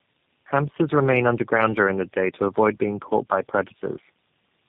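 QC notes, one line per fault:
Throughout: tandem speech coding. Nothing above 3.7 kHz, and the speech is rough, muffled and warbly beyond what a single narrowband coder leaves. The sound points to three low-rate speech codecs in a row, likely AMR-NB, GSM full rate and G.729A, joined by G.711 links. At each border the call was decoded and re-encoded, so each coder modelled the previous one's errors as if they were speech and stacked its own distortion on top.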